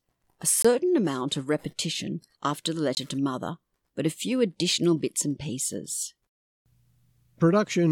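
At 0.62 to 0.65 s, just before "amount of repetition after", and again at 2.95 to 2.97 s, between "of repetition after the" and "to mother but", the speech cuts out for about 20 ms. Each gap is a Bluetooth dropout, likely from a single packet that reached the headphones too late and was dropped. On a waveform each gap is a flat hole; a spectrogram shows a thin blank vertical band across all frequencies. The speech then resumes as if it had played on.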